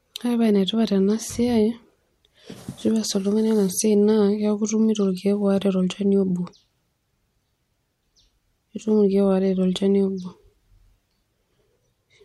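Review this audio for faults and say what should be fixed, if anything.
Nothing stood out on listening to this speech recording, so there is nothing here that needs fixing.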